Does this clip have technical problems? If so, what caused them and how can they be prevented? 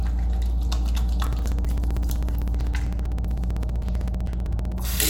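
Yes. From 1.26 s to 4.85 s there are periodic USB or driver dropouts: every 64 ms something stalls the audio path and roughly 4 ms drops to silence, giving a steady ticking. To prevent it, keep busy devices off that USB bus and enlarge the driver buffer.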